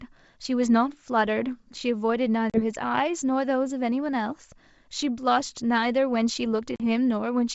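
At 2.50 to 2.61 s and again at 6.76 to 6.81 s the speech drops into a hard-edged silence of about 40 ms, consistent with a couple of lost packets on an ADPCM call carried over wideband G.722. The gap itself is clean digital silence. After each hole the decoder's adaptive predictor and step size no longer match the sender's, so the speech resumes slightly distorted before settling.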